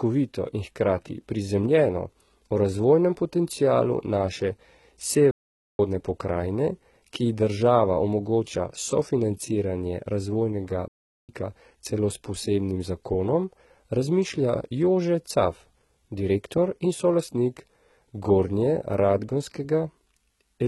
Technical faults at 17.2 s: HE-AAC compression

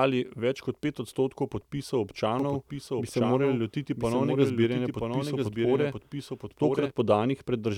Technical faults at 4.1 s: doubled audio track

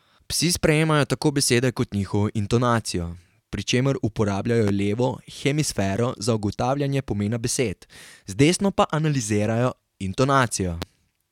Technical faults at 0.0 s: none

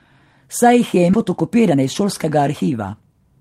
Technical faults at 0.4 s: none

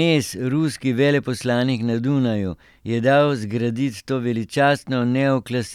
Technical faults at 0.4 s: none

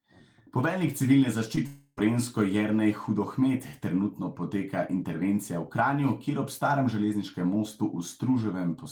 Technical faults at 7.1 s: none

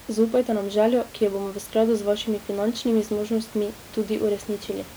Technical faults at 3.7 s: none

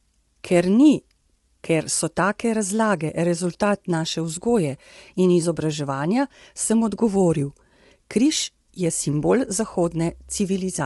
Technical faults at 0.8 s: low-delay AAC compression

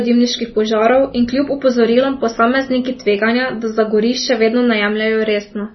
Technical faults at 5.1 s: MP3 compression

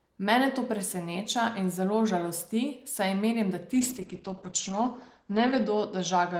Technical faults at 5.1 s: call bitrate drop

